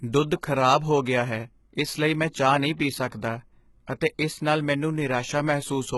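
From start to finish the speech carries heavy codec damage, most likely HE-AAC compression at a very low bitrate, with the sound fitting something around 16 kbps. The upper band is not the real signal but lower content copied upward and shaped by a coarse envelope, so s sounds turn gritty and metallic while the treble still seems bright. On a spectrogram the rebuilt treble looks smeared and blocky, with harmonics that fail to line up across the crossover, and nothing at all above 11.8 kHz.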